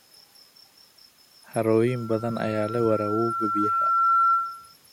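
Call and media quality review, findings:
Loudspeaker feedback squeal, 1.87 to 4.74 s: steady 1.4 kHz tone swelling over roughly 2 s to a few dB above the speech. Mic-to-speaker acoustic loop with gain above unity. Spectrogram: one bright horizontal line; waveform: growing sinusoidal envelope.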